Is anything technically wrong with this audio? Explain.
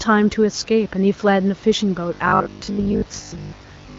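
Yes. From 2.14 s to the end, the speech turns into a rigid, metallic buzz at a fixed 50 Hz that only loosely tracks the talker. This is robotic sound from repeated short buffers. The likely cause is new audio arriving too slowly, so the playback side keeps re-playing its last chunk. A 50 Hz buzz fits a repeated segment of about 20 ms. Roughly 70 percent of that stretch is repeats, so most of the real audio is skipped.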